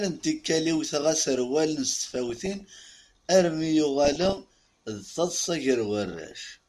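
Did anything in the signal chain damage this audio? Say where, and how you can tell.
Yes. The damage is in the broadcast codec stage: DAB burbling in three bursts, at 1.88 to 2.89 s, 4.05 to 4.78 s and 6.04 to 6.48 s. Short noise blips ride over the speech as individual frequency bands jump in level frame by frame. This points to weak reception, with a bit error rate of around 0.7 to 1 percent getting past error correction and corrupting MP2 samples and scale factors in the sub-bands.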